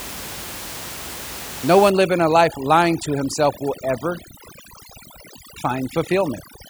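From 1.90 s to the end of the speech, overdone noise removal takes hold. Room noise sits about 14 dB below the voice, and a noise reducer set too strong cuts every frequency band it judges close to that noise. Pauses collapse into near silence dotted with twinkling specks, and the voice loses its quieter components along with the noise. Unlike a noise gate, which mutes everything at once, this acts band by band.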